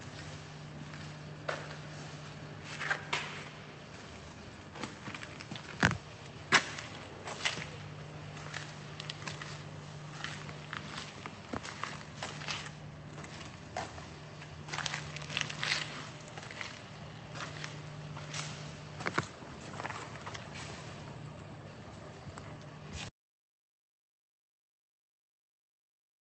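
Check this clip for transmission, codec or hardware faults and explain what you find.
No transmission, codec or hardware faults are present.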